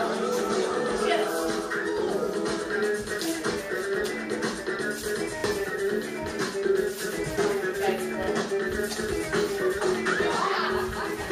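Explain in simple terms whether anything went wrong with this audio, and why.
Two quick stutters occur, at 5.4 s and 8.24 s. Each is a repeated buffer. New sound arrived late, so the player replayed its last short chunk once. That chunk lasts 0.04 s. You hear a brief hiccup, and a tiny slice of sound goes missing.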